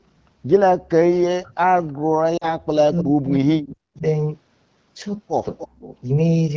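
Speech suppressed in double talk first appears from 0.98 to 1.79 s and again from 2.07 to 4.05 s. The speech dips sharply, by something like 40 dB at its deepest, and cuts out in pieces. This is likely because both ends were talking at once, and the echo canceller, unable to tell the near talker from loudspeaker echo, attenuated everything it heard.

Lost AMR speech frames land inside that second stretch, from 2.37 to 2.48 s. About 40 ms of signal is missing, which fits two dropped 20 ms frames. The wideband decoder fills the gap by repeating its last good pitch and vocal tract settings at falling gain. The result is a short drop to near silence, and the speech returns rough for a moment.

Echo leak is heard at 2.97 s to 3.03 s and at 5.58 to 5.66 s. Each is a faint scrap of the speech returning 291 ms late, roughly 15 dB and then 20 dB below the direct speech. It is likely a loudspeaker on one side whose echo canceller let part of the microphone pickup through.

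Speech suppressed in double talk returns from 5.64 to 5.94 s. It overlaps the second echo scrap and again drops the speech steeply for about 0.3 s.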